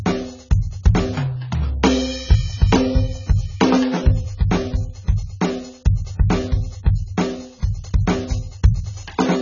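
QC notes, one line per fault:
Throughout: AAC compression. This music clip has nothing above 7 kHz, so the top end is gone and everything sounds dull and boxed in. Sustained notes warble and the high detail turns fizzy and smeared, because the encoder is dropping whole chunks of the spectrum and patching some bands with substitute noise to save bits. The damage is heavy and points to a very low bitrate, something around 16 kbps, most likely an AAC-LC encode.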